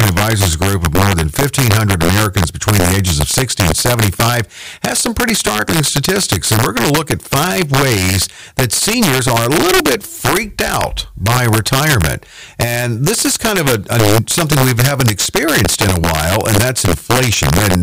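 Speech throughout the clip carries integer overflow: the signal is driven about 3 dB past the top of the integer range, and instead of being limited, the louder peaks wrap around to the opposite extreme. Only a small share of samples, on the order of one or two percent, exceed the limit. Each one jumps across the full scale, so the loudest syllables produce violent, sharp cracks far harsher than ordinary clipping.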